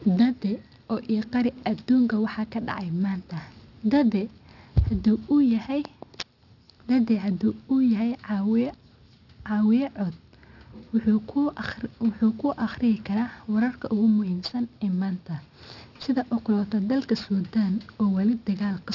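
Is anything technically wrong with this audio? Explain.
Yes, there's aliasing across the whole clip. The speech sounds like it was downsampled without a low-pass filter, which fits a 12 kHz rate, so energy above 6 kHz folds back below it. Sibilants turn gritty and metallic, with the foldover sitting roughly 25 dB under the signal.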